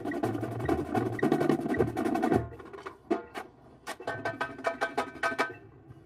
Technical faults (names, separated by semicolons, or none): channel delay (comb filtering); clock drift between sender and receiver; repeated timing corrections